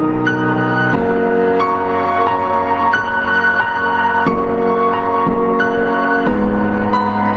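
Gain pumping runs through the whole clip: the level swings by around 15 dB, pulling down under each loud sound, likely from a fast limiter fighting excessive gain. The waveform looks flattened. The spectrogram fades above 8 kHz, as expected on a call path.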